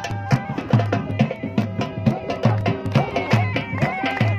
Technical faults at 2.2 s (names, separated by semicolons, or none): periodic USB or driver dropouts